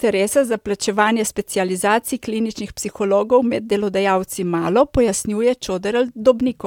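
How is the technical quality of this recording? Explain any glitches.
The recording has no technical glitches to report.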